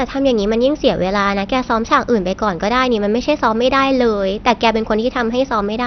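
Throughout the speech the sound is dull and muffled, with nothing above about 6.2 kHz, and a gurgling, granular roughness runs through it as upper frequencies flicker in and out. This is likely MP2 compression at a heavy setting, with damage that fits a low rate around 48 kbps. Layer II divides the spectrum into 32 sub-bands and, starved of bits, shuts off the top bands entirely while quantising the remaining ones coarsely, which produces both the missing treble and the bubbling texture.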